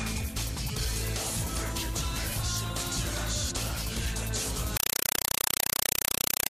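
From 4.77 s to the end at 6.51 s, the sound becomes loud, chattering static: a compressed stream played as audio, with 4 ms noise bursts repeating at 31.25 Hz, which fits undecoded Dolby Digital passed through as ordinary samples.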